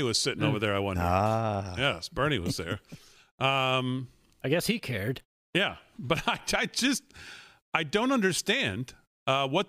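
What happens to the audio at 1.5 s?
Nothing goes wrong at 1.5 s; the speech there plays through cleanly, with no dropout, click, distortion or other fault.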